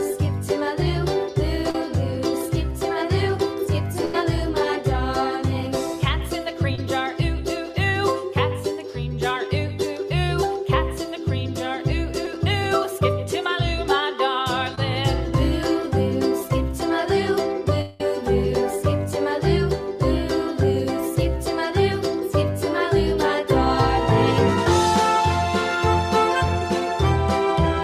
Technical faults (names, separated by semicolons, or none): short concealed packet loss; burst of packet loss; long network dropout